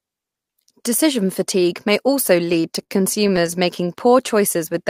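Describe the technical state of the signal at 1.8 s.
At 1.8 s the speech signal is intact, with no audible technical fault at that moment.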